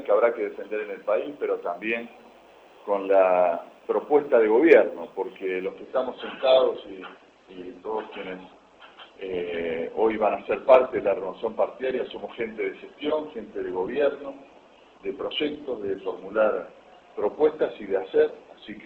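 At 5.66 s the treble suddenly thins, with nothing above 8.2 kHz and codec artefacts rising, through to the end with no gap. This is an adaptive stream at a lower bitrate, consistent with a drop from 64 to 12 kbit/s Opus.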